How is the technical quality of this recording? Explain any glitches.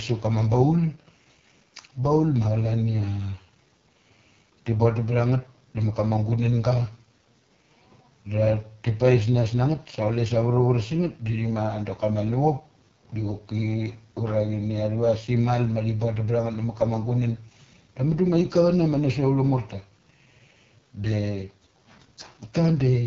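The technical quality is poor. Throughout the speech, the voice sounds rough and raspy, with nothing above about 6.9 kHz. This is the AMR wideband (HD Voice) codec at one of its lowest modes, which fits a bitrate of about 6.6 kbit/s. The coder rebuilds speech from a vocal tract model driven by sparse pulses. At this rate there are too few pulses to carry the fine detail, so harshness replaces natural texture, and the band above about 6.4 kHz is synthetic shaped noise.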